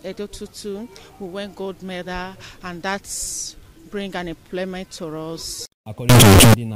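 Near the end, from 6.09 to 6.54 s, the sound suddenly bursts into a very loud, harsh, buzzing distortion, and even the quiet bits come through as loud as everything else. That's the signature of a signed and unsigned mix-up, likely in how the 8-bit samples were read. Flip the top bit and every small swing around zero becomes a leap across the full range.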